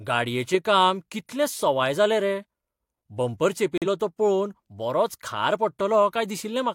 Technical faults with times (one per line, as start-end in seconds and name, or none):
3.78-3.87 digital broadcast dropout